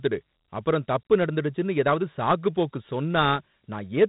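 From start to finish the speech carries Dialogic VOX ADPCM coding damage. The codec stores each sample as a 4-bit step relative to an adaptive prediction, so quantisation error rides on the signal and is heard as a gritty hiss that tracks the speech. Nothing remains above 3.9 kHz, leaving a narrow telephone-band sound. The bandwidth and degree of grit fit a 32 kbps stream at 8,000 samples a second.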